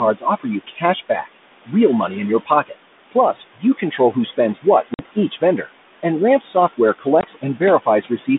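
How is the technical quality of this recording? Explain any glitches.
The quality is fair. It's telephone-band speech (roughly 200 Hz to 3.6 kHz) with light coding grain that fits 32 kbit/s G.726 ADPCM. Room noise sits about 14 dB under the speech, and a noise suppressor is clearly working hard on it.

Noise suppressor artifacts run throughout. The suppressor pulls the steady background down by about 19 dB frame by frame, so the noise ducks and swells between phrases.

Speech cut by the noise suppressor happens at 0.17–1.68 s (ending just before "real money in your"), 2.45–2.74 s (right after it), 3.11–4.0 s, 4.37–5.7 s and 6.4–8.28 s. The suppressor mistook quiet speech for noise and dipped it by up to about 20 dB, so endings and soft consonants sound swallowed.

Packet loss on an ADPCM call shows up at 4.94 s as a 50 ms hole and at 7.21 s as a 20 ms hole, likely a handful of packets and then a couple. 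Each dropout is a hard-edged silence, and afterwards the decoder's predictor is out of step, so speech comes back slightly distorted before settling.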